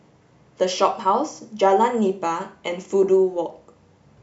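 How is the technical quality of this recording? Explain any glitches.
No glitches or technical faults can be heard here.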